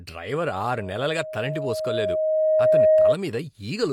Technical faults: loudspeaker feedback squeal

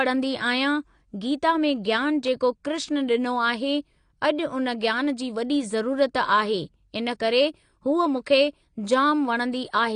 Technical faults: AAC compression

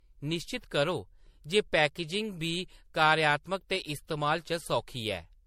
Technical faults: generation loss

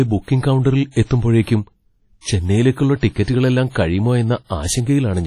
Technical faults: WMA compression; pre-echo

